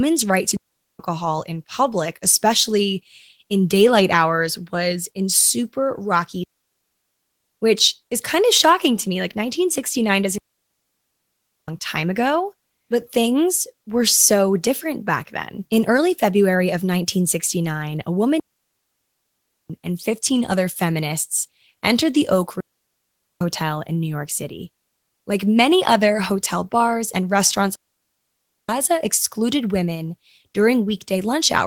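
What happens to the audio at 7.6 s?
At 7.61 s the audio returns from a digital wireless dropout that began at 6.44 s, after "was in super rocky". The receiver lost too much data and muted for about 1.18 s. The hole is clean near silence with no noise burst. Speech resumes with "which is kind of".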